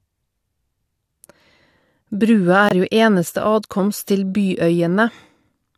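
At 2.69 s the sound drops abruptly into total silence for about 38 ms and then resumes on time. This is a corrupt frame muted: the decoder rejected one damaged compressed frame and the player substituted silence, a gap consistent with a single frame's length.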